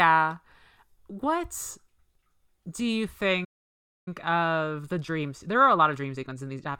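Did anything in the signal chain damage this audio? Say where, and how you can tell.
Yes. Playback stall: the speech cuts to silence after "do you" from 3.44 to 4.08 s, about 620 ms, likely a starved buffer or blocked player thread.

Time-compressed catch-up: from 4.08 s to the end, speech runs 1.15 times fast at normal pitch, as the player splices out small pieces to clear its backlog.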